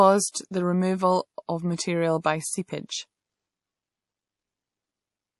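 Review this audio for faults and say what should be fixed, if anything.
Throughout, the speech sounds watery, with nothing above 11.5 kHz. This is likely MP3 compression at a low bitrate, around 48 kbps. Encode at a higher bitrate.

From 0.32 to 0.34 s, a 28 ms pre-echo smears a hiss ahead of an attack. Block-spread coding noise causes it. A higher bitrate prevents it.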